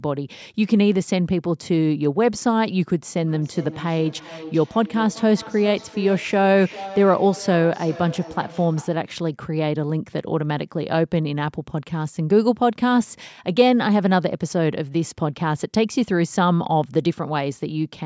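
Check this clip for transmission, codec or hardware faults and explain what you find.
There's one clear fault: feedback echo between two devices, running from about 3.2 s to 9.1 s. The speech comes back at a steady interval of roughly 0.4 s, peaking at about 16 dB below the direct speech. What's happening is that a second device in the same room plays the call out loud, and the first device's microphone picks it up again. Its echo canceller only handles its own playback, so the repeat slips through. The call's microphone processing is audible too, with nothing above 8 kHz.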